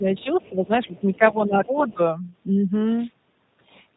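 Speech runs through the whole clip with a rough, slightly synthetic, band-limited quality: nothing above 4 kHz survives, and the sound has the buzzy texture of a low-rate model codec. This is the G.729 codec at 8 kbit/s, which rebuilds each 10 ms frame from a filter, a pitch predictor and a few pulses. The damage is plainly audible. In the first two seconds the talker's level sags by about 10 dB at 0 to 0.07 s, 0.49 to 0.71 s and 0.87 to 1.99 s, the longest dip lasting about half a second. This is likely speech suppressed in double talk, with the echo canceller turning down the talker while the far end was also speaking. Around and within these dips, a faint second voice can be heard at 0.15 to 0.24 s, 0.41 to 0.67 s, 0.83 to 1.41 s and 1.65 to 1.95 s, about 25 to 30 dB below the main speech. That points to the other side's voice leaking through from a loudspeaker, likely residual echo the canceller missed. 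From 2.81 to 3.13 s a short swish of static rises over the audio, a wireless microphone noise hit caused by the radio link fading and letting receiver noise through.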